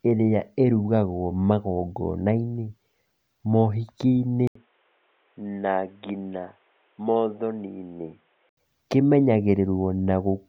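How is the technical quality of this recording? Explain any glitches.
The recording has one clear glitch. From 4.47 to 8.57 s the input likely switched to a poorer device. After an 80 ms gap the speech loses everything above 3.8 kHz and turns boxy, slightly quieter and faintly hissier, until full quality returns.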